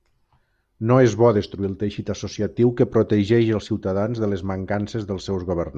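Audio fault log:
Listening closely to the speech, nothing stood out as a fault at any point.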